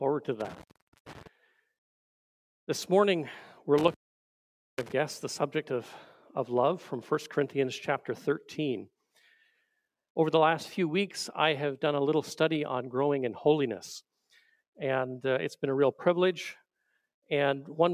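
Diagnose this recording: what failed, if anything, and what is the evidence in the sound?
The failure is in the analogue wiring: an intermittent contact. The sound drops out twice. The first break runs from 0.40 to 1.27 s, with the line open for about 0.45 s. The second runs from 3.78 to 4.92 s, with the line open for 0.84 s. Each gap has crackle at its edges as the connection makes and breaks. Faint hiss remains while the line is open. A loose plug or cable conductor is losing contact for a moment.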